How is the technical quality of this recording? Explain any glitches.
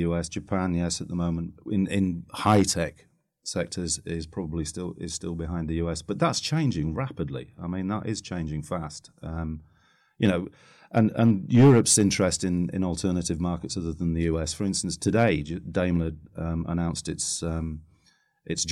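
The recording has four bursts of hard clipping. Peaks are driven past the level limit and sliced flat: at 2.46–2.62 s, between "the moment in in" and "tech sectors is probably", overdriven by about 6 dB; at 10.24–10.29 s by about 2 dB; at 10.97–12.02 s, just before "in in alternative markets", by about 8 dB; and at 15.08–15.29 s by about 3 dB. The flat tops add high harmonics, heard as crackly fuzz only on loud moments. The sharp edge and the sudden onset set it apart from gentler, rounded saturation.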